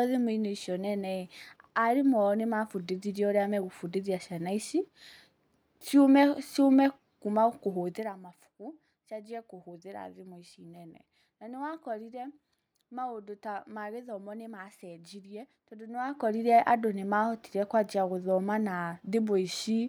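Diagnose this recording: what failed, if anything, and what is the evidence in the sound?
Nothing failed; no stage of the chain shows faults.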